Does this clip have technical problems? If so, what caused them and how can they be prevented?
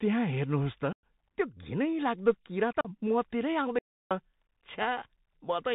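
Yes. The speech runs through the Bluetooth CVSD headset codec for its whole length, and the damage is plainly audible. Nothing reaches above 4 kHz, so the sound is narrowband and muffled. The one-bit delta modulation, which fits a 64 kbit/s headset link, cannot follow fast loud transients with its adaptive step, so sibilants turn scratchy and a grainy hiss sits under the speech. Prevention: record through a wideband path such as mSBC or LC3, or a wired microphone, instead of the headset voice profile.

There is unconcealed Bluetooth headset packet loss in two places. The first runs from 0.93 to 1.03 s, about 105 ms, right after "त्यहाँ हेर्नुहोस् त". That gap points to a burst of roughly fifteen consecutive short voice packets going missing. The second runs from 2.81 to 2.89 s, about 38 ms, which matches several lost packets. Nothing fills either gap, so the holes have hard edges and the level recovers quietly afterwards. 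Prevention: keep the headset close to the receiver, away from Wi-Fi and other 2.4 GHz interference.

There is an audio dropout to silence from 3.79 to 4.11 s, about 320 ms. The signal is replaced by silence with no room tone, and it cuts off and resumes abruptly in mid-flow. The likely cause is a brief loss of the input device or link while the recorder kept writing samples. Prevention: use a stable input connection and disable automatic device switching or muting during capture.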